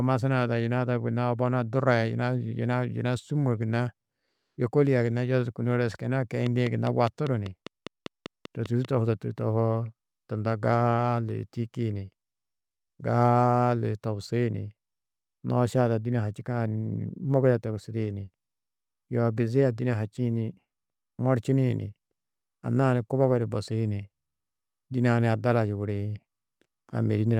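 A train of clicks runs from 6.46 to 8.86 s in this speech: a steady ticking at about 5 clicks per second, evenly spaced, some fifteen in all, each much the same sharp pop. They stand out well above the speech, peaking roughly 10 dB over it, and carry on through pauses as well. Such a regular run of identical pulses is likely interference from nearby equipment or a faulty connection or power supply.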